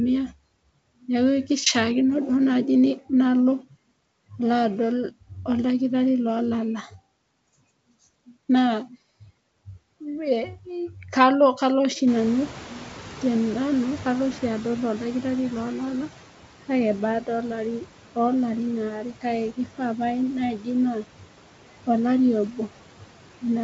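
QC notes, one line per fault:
throughout, noise suppressor artifacts: The suppressor pulls down the bands it judges to be steady noise by about 12 dB, deciding frame by frame. The background dips in the gaps between phrases and swells back beneath the speech. On a spectrogram the noise floor looks mottled and patchy in both time and frequency, and the waveform's floor pumps up and down with the speech.
12.07–16.02 s, noise suppressor catching up: The room noise jumps by about 20 dB at roughly 12 s, leaving it about 18 dB below the speech. The suppressor's noise estimate lags behind that step, so the new noise first comes through with less reduction and then settles down over about 3.95 s as the estimate adapts, with about 9 dB of cut over this stretch. On a spectrogram a bright band of broadband noise appears at 12.07 s and fades gradually toward 16.02 s. The waveform shows a raised floor tapering down over the same span.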